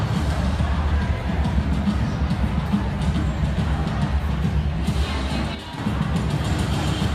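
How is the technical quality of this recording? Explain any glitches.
There is one glitch, a brief level dip. From 5.55 to 5.78 s the sound drops abruptly by about 6 dB, then returns. The likely cause is one channel dropping out of a stereo source. Summed to mono, shared content halves, and anything only in the lost channel vanishes.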